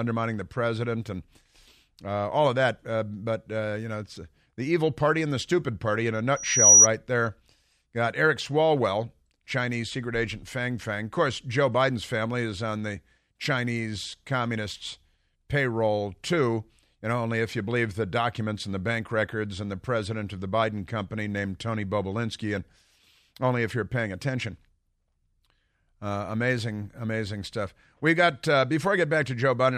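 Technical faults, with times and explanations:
6.36 to 6.87 s, loudspeaker feedback squeal: a thin, piercing tone at 5.8 kHz rises out of the speech, swelling over roughly a third of a second until it stands far above the voice, about 15 dB louder, then cuts off. The microphone is hearing the loudspeaker it drives, and at that one frequency the round trip returns more than it sent, so the tone feeds itself and keeps growing until the loop is broken.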